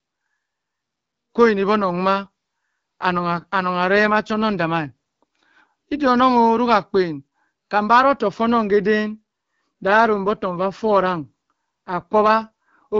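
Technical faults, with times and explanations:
2.14–6.08 s and 9.87–13.00 s, AMR rate drop: the HD Voice speech turns rougher and more synthetic with no gap or band change, which fits a step down from 12.65 to 8.85 kbit/s.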